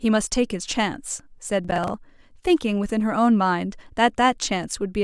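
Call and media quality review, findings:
Processor overload crackle, 1.65–1.94 s, speech. Audio processing thread overloaded, missing about seven buffer deadlines, consistent with buffers of around 20 ms. Each miss replays stale audio with hard edges. Result: a burst of gritty, tearing crackle over the speech that stops once the load clears.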